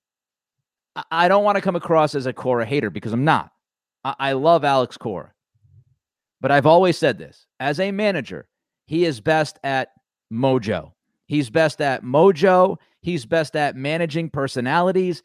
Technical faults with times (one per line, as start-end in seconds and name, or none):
none